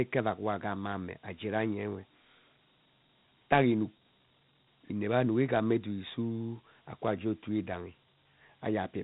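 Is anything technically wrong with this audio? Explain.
Yes. Throughout the speech there is a gritty, grainy hiss that rides along with the speech and rises and falls with it, and the sound is dull, with nothing above about 3.8 kHz. This is Dialogic VOX ADPCM damage, plainly audible. The codec stores each sample as a 4-bit step from a running prediction rather than as a full value. That coarse quantisation leaves signal-dependent noise. The narrow band points to telephone-rate sampling, which fits a 32 kbps OKI ADPCM stream.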